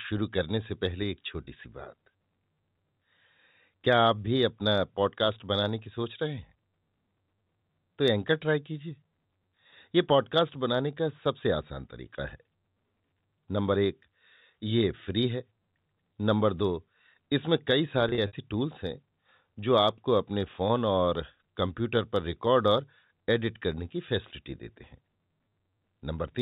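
Speech over telephone-band G.711, which passes nothing above 4 kHz, has two bursts of packet loss with pitch repetition. At 1.44 s a 30 ms gap is bridged by repeating the last pitch period, giving a brief held, buzzy sound. From 18.09 to 18.33 s about 120 ms goes missing in several scattered gaps, the longest 60 ms. This points to a few lost packets. Each gap is filled with a repeated, fading pitch period.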